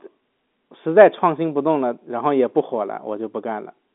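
The speech carries no audible technical faults.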